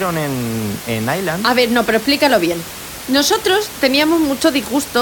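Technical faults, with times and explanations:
No technical faults are present, so there are no times or explanations to give.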